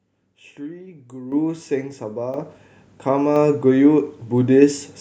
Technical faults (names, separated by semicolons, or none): microphone volume stepped up